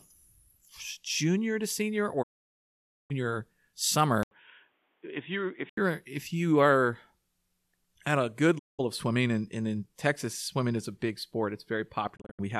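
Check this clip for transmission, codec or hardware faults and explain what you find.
Two kinds of fault are present in this speech clip: repeated digital broadcast dropouts and a temporary input switch to a poorer device.

The digital broadcast dropouts occur at 2.21 to 3.12 s, 8.57 to 8.81 s and 12.15 to 12.41 s. Each time, the receiver stopped getting valid frames and muted until good data returned, with a 20 ms fade into each gap. The first hole is about 0.86 s long and the second about 0.19 s. The lost durations are consistent with frames of roughly 24 ms. The last event is not one gap but several short holes spread over about 0.22 s, the longest 72 ms. Whatever speech was transmitted during these gaps is gone.

From 4.23 to 5.77 s the speech turns dull and boxy, with nothing above 3.8 kHz. This is likely an input switch to a poorer device, such as a different microphone or a headset call profile. 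An 80 ms silence marks the switch itself. During the span the level sits a few dB lower, and a faint new noise floor appears well below the speech. Full bandwidth returns once the span ends.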